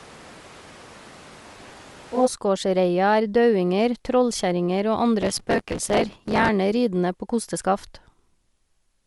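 From the first moment to 2.25 s the speech sounds like a switch to a distant microphone, likely the close microphone dropping out in favour of one further away. It is roomy and hollow, with thin bass, about 15 dB lower than what follows, and room noise sits about 25 dB below the speech. On a waveform the first stretch is visibly smaller, then jumps up abruptly at 2.25 s. A spectrogram shows weaker low frequencies and a raised noise floor filling the gaps between syllables.

Within that stretch, from 1.50 to 1.73 s, comes processor overload crackle. The processor missed dozens of deadlines in a row, which fits a buffer of about 5 ms. Each miss repeated a slice of old audio with hard edges, so the sound tears and grits. On a waveform this shows as a run of tiny step discontinuities. A spectrogram shows thin vertical broadband lines packed close together.

The crackle returns for longer, from 5.21 to 6.49 s, right after "er daudinger trollkjerringer og". 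Here well over a hundred missed buffers leave more than a second of gritty tearing riding on the speech. It looks the same as the first burst, only wider: a comb of vertical streaks on the spectrogram and a jagged, stuttering envelope in the waveform.

Throughout the clip there is a breathy, grainy edge, likely from Bluetooth LC3 compression at a rate near 48 kbps with 7.5 ms frames. The codec zeroes much of the upper band and fills it with noise. On a spectrogram the top of the spectrum looks speckled and blocky rather than smoothly shaped, with short-time patchiness at the frame rate.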